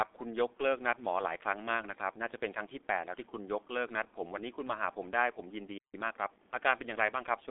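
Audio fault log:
Throughout: G.723.1 codec. The speech sounds muffled and hoarse, with smeared consonants. Nothing above 3.8 kHz survives, and the line band runs from 300 Hz to 3.6 kHz. At about 6.3 kbit/s the codec models the voice coarsely, so the damage is heavy.
5.78 to 5.94 s: playback stall. The speech cuts out mid-flow for about 158 ms and is silent. It then resumes. The likely cause is the player running short of data or its thread being blocked, which halts output until it recovers.
5.94 to 6.56 s: time-compressed catch-up. Right after the gap, the speech runs hurried at 1.25 times normal speed. The pitch stays normal. Small slices are cut out and cross-faded to clear the backlog.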